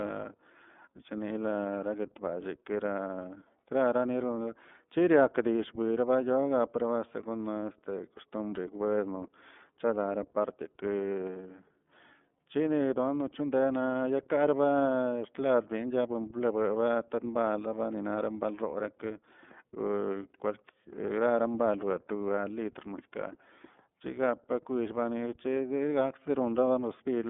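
Throughout the speech, the iLBC codec damage is plainly audible: nothing passes above 3.8 kHz, leaving a 200 Hz to 3.5 kHz telephone band, and each block is coded alone, giving a rough, synthetic edge. That independent per-frame roughness, fitting 30 ms frames at 13.33 kbps, separates it from simple band-limiting.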